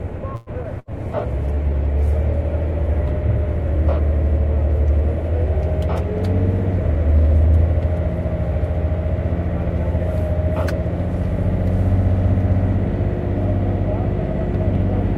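At 0.35 to 0.50 s a call audio freeze, likely from delayed packets draining the jitter buffer, stretches the last sound into a fading 113 ms buzz or hiss. On a spectrogram this appears as smeared, repeating bands. Nothing is lost, but the audio now runs 113 ms late.

From 0.63 to 0.67 s, short concealed packet loss drops 40 ms of audio, bridged by only 9 ms of synthesis. It is heard as a brief smear or wobble. The delay shrinks by roughly 30 ms.

At 0.80 to 0.91 s a burst of packet loss removes 80 ms. It is replaced by a 77 ms held buzz or hiss that decays in the waveform before the audio resumes further on.

From 1.02 to 4.78 s a call bitrate drop takes the encoder from 64 to 15 kbps, with 1.38 s at the lowest rate. The sound becomes rough and muffled. On a spectrogram the upper frequencies are visibly sheared off and the remaining texture looks blotchy.

Between 6.74 and 7.55 s a jitter buffer speed-up plays the audio at about 114% speed at unchanged pitch, trimming roughly 150 ms. 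The events sound hurried, and the waveform looks compressed in time.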